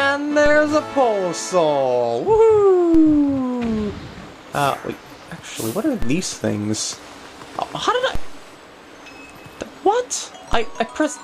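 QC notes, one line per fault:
0.46, 2.95, 6.02, 8.15 and 10.53 s: DC step. The waveform's zero line jumps abruptly, by about -14 dBFS at the first two and about -12 dBFS after that. Each jump is heard as a low thump, and the offset then decays back through a 2 Hz high-pass while the audio carries on unchanged.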